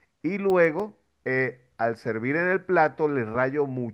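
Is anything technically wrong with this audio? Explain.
Yes. From 0.50 to 1.39 s the speech carries seven CD scratch ticks, none longer than a few milliseconds. A scratch destroyed more data than error correction could rebuild, so the player patched the gaps. Unlike random vinyl crackle, the ticks recur steadily, once per disc revolution.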